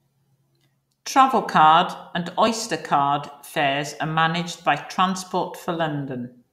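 No technical faults are audible at any point in the speech.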